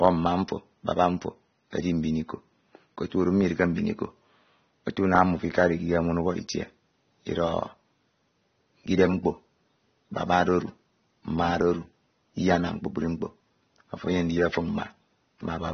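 Speech, with AAC compression damage audible throughout. Nothing is heard above 6.4 kHz, so the sound is dull. Sibilants and held sounds have a fizzy, warbling texture. This is likely low-bitrate AAC-LC, around 24 kbps, with sparse spectral coding and a lowered cut-off.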